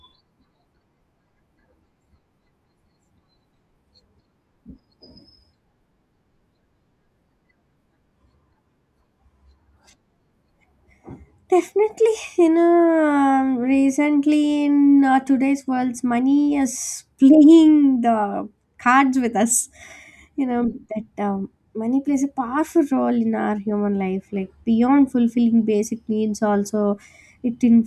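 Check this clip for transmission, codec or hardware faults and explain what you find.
No transmission, codec or hardware faults turn up anywhere in the clip.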